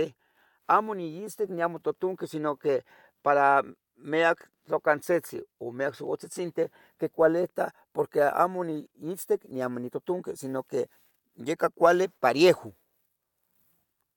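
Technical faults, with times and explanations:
No technical faults can be heard in the speech.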